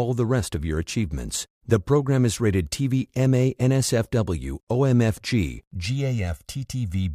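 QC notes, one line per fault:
5.86–7.14 s, channel delay (comb filtering): for the last stretch of the speech, one channel runs late by about a millisecond and a half, and summing to mono cancels shared content at evenly spaced frequencies, the first near 300 Hz. The result is a sudden hollow, phasey tone. Unlike a flanger's sweep, the notches stay fixed. Unlike simple low-pass dullness, the top end is still there, just riddled with regular gaps.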